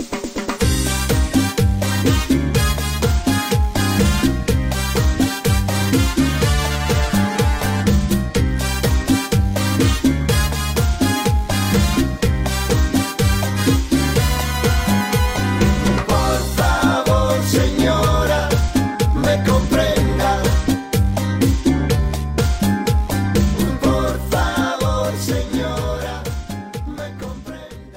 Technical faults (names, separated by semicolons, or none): none